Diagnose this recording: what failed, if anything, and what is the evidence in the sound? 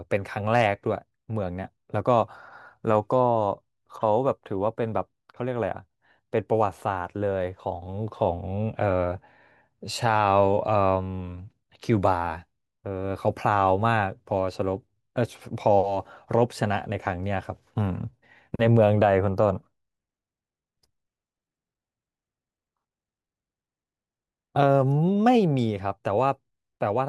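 Nothing failed in this recording, and there is no evidence in the sound of any fault.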